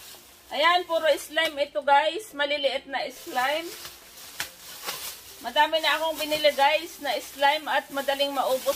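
No technical fault can be heard anywhere in the recording; the signal holds steady throughout, with no break, disturbance or change in its character.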